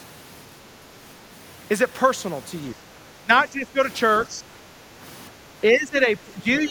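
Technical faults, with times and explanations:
2.73–2.79 s, 3.23–3.80 s, 4.27–4.53 s and 5.61–6.70 s, speech suppressed in double talk: the speech itself sinks by around 10 dB in four patches, from a brief nick at 2.73 s to most of the final second. The likely cause is the echo canceller hearing the far side talking at the same moment, failing to separate the two, and pulling both down. Unlike gating, the talker's own speech dips, not just the room behind it.
4.81–4.94 s, background gated by the echo canceller: for a moment the room tone underneath drops by about 6 dB, then comes back. The canceller is clamping the microphone while the loudspeaker plays and releasing it once playback stops. What marks this as gating rather than double-talk suppression is that the ambient bed dips briefly, with no speech being chopped or dulled at that point.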